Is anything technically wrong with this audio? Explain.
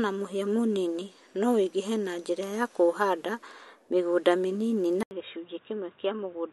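Yes. At 5.03 s the audio stops for 80 ms. It resumes dull and quieter, with nothing above 3.8 kHz. Likely cause: input switched to a poorer device.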